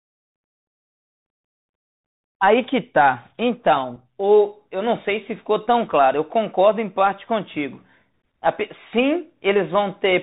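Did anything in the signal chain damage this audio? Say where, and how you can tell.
Yes. Bluetooth CVSD headset codec damage throughout: the speech stops at 4 kHz, and s sounds scratch over granular hiss because the one-bit adaptive step can't follow fast peaks.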